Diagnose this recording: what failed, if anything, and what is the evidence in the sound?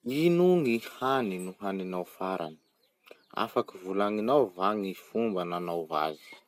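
Codec stage: speech sounds swirly and hollow throughout, attacks smeared, nothing above 16 kHz. This is likely generation loss from about ten MP2 passes requantising on shifted frames.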